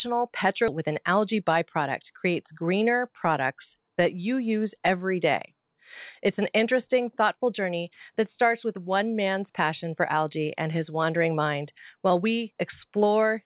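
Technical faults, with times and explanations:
0.68–0.79 s, skip ahead: the speech jumps forward with no gap, losing about 0.7 s of sound that never plays. A stretch of incoming audio was discarded, either lost on the way or dropped when the jitter buffer overflowed while later audio was already queued. The receiver then joined the two sides of the cut almost directly, so the delay fell by roughly the same amount and the speech lurches abruptly into later material.
1.34–2.04 s, jitter buffer speed-up: for about 0.7 s the speech runs at 107% of normal speed with its pitch unchanged, sounding briefly hurried. The buffer held more audio than its target, so the receiver trimmed the excess by repeatedly cutting out short slices of one or a few pitch periods, around 50 ms in total. Because whole periods are removed rather than resampled, tempo rises while pitch stays put. Throughout, the audio is band-limited to 4 kHz, which fits a G.711 mu-law call path.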